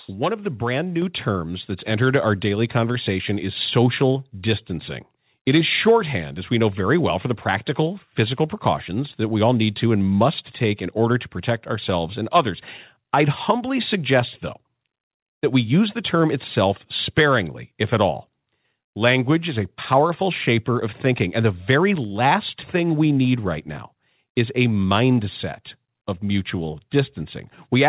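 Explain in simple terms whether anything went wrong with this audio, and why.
At 1.02 s, right after "of the brand" and just before "terms that's", the microphone volume stepped up: the call software judged the input too quiet and raised it in one step, so the voice and the background noise both get louder at once.

The audio passed through a WebRTC call path using a telephone codec. That is why nothing above 4 kHz can be heard.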